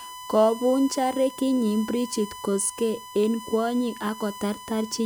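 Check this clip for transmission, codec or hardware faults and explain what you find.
One hardware fault runs through the whole recording: USB whine, a steady tone at 1 kHz sitting about 15 dB below the speech. The USB bus draws current in bursts every millisecond, and that 1 ms rhythm couples into the audio path through shared power or ground, producing a fixed-pitch whine at 1 kHz. It stays at the same pitch from start to end and sits under the speech throughout.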